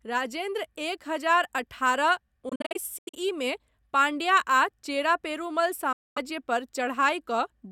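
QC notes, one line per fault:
2.49–3.15 s, Bluetooth dropout: just after "राजेन्द्र एक हजार अठारह" the speech breaks into a string of short silent holes, about 277 ms missing in total across 0.64 s, the longest gap 85 ms. The speech picks up later in the stream rather than where it stopped. The likely cause is audio packets reaching the headphones too late and being discarded, so playback falls silent until good ones arrive.
5.92–6.18 s, Bluetooth dropout: right after "चेरा पेरुमल" the speech cuts out, about 235 ms missing in all, then returns as if it had kept playing through the silence. The likely cause is packets dropped on the wireless link before playback.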